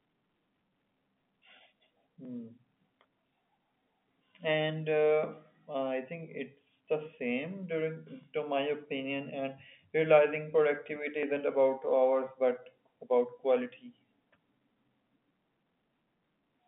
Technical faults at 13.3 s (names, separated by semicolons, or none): clock drift buffer slips